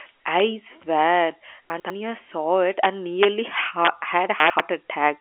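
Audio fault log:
0.40, 2.84–2.86, 3.23–3.25 (just after "saw it and"), 3.85–3.87 and 4.59: integer overflow. Five violent cracks land on loud peaks, one at 2.84–2.86 right after "saw it". The gain pushed these peaks past the largest integer, by about 3 dB at most. They wrapped to the opposite sign instead of being limited. Each peak jumps across the full range, so the crack is far sharper than clipping. The G.711 telephone band tops out near 3.6 kHz.
1.70–1.90 (just before "saw it and") and 4.40–4.60: chunks out of order. Both spans sound jumbled. Each holds two 100 ms blocks, and one of them plays one block late, after the block that should follow it. No audio is missing, but the sequence is swapped. That leaves three hard joins per span. The second span also takes the overflow crack at 4.59.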